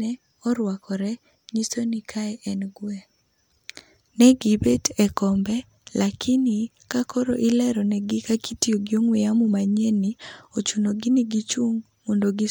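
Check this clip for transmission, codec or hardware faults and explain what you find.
No faults found here.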